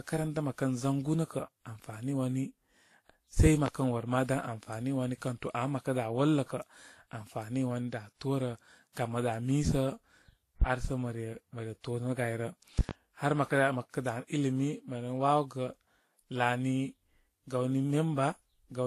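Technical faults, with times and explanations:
Throughout, transcoding between lossy codecs: the speech carries two layers of coding damage at once, smeared, swirly low-rate artefacts beneath a second codec's own graininess, with nothing above 14.1 kHz. That likely points to a low-rate Vorbis encode, around 35 kbit/s, re-encoded as WMA. Unlike a single low bitrate, the artefact types differ and overlap.
3.46–3.70 s, 10.62–10.65 s and 12.79–12.93 s, loud pop: sharp pops about 15 dB above the speech, a pair at 3.46 s, a single one at 10.62 s and another pair at 12.79 s. The speech runs on unbroken beneath them, which sets them apart from dropouts. Each is likely a sudden voltage step, such as a switch, plug or static discharge.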